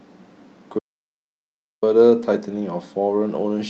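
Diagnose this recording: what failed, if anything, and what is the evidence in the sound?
Audio dropout to silence, at the capture stage. The speech cuts off abruptly at 0.79 s and returns at 1.83 s, about 1.03 s later. The gap is silent with no room tone. The input was likely lost while the recorder kept writing silence. Whatever was said in that span is gone.

Network stage. At 2.03 s one 20 ms frame is a lost packet rebuilt from error correction. There is no gap. That moment sounds briefly rougher and noisier. The Opus decoder filled the loss with the low-bitrate copy carried in the following packet.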